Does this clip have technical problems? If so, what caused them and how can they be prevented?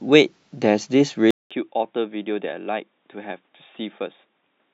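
Yes. Input switched to a poorer device at 1.31 s: after a silence of about 200 ms, the speech continues to the end with nothing above 3.8 kHz, so it sounds dull and boxy, and it sits about 10 dB quieter, with a new noise floor roughly 45 dB below it. The likely cause is the recording system moving to another microphone or a headset's call profile, which passes a narrower band. Locking the input device in the system and app settings, and disabling automatic switching to headsets, would prevent it.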